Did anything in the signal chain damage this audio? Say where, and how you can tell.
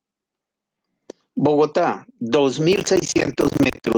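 Yes, two stages left marks. At the network and codec stage, lost packets were rebuilt from error correction at 1.91 to 1.93 s and again from 3.17 to 3.47 s. There is no gap in the speech at either point, but both passages turn briefly rougher and noisier. That is the decoder playing the low-bitrate backup copy that the next packet carried in place of the lost original. The longer second stretch points to several separate losses rather than a single dropout.

At the driver or buffer stage, processor overload crackle starts at 2.73 s and continues to the end of the clip. A gritty, tearing crackle rides on top of the speech. It is made of many tiny hard-edged silent gaps, which fits buffers of about 10 ms each missing their deadlines dozens of times in a row. The processor could not fill each buffer in time, so silence went out instead. This crackle also overlaps the later packet-recovery stretch.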